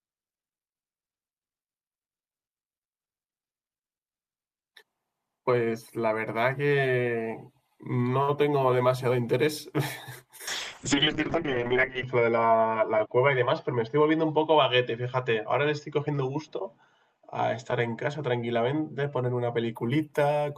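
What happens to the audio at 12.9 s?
At 12.9 s the speech sounds rough, watery or muffled, with the top end missing. It is a call bitrate drop from 10.49 to 19.81 s: the encoder's rate fell from 32 to 7 kbps, so Opus coded far more coarsely and narrowed bandwidth from 20 kHz to 8 kHz.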